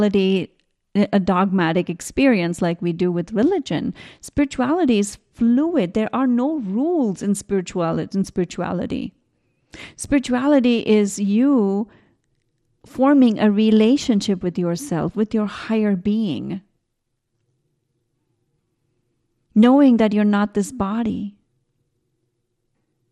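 Speech, with MP2 compression damage throughout: the sound is dull and gurgling, with granular distortion as upper bands flicker out, likely from encoding at about 80 kbps.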